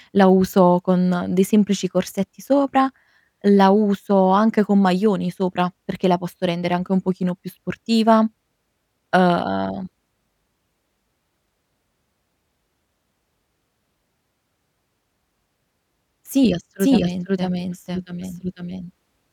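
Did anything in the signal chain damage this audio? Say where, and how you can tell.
Yes. From 16.8 s to the end, a doubled audio track appears: a full-band copy trails about half a second behind at roughly equal level, likely from a second, slower capture path or routing stage. Unlike echo or reverb, it starts abruptly and has no decay or room colour.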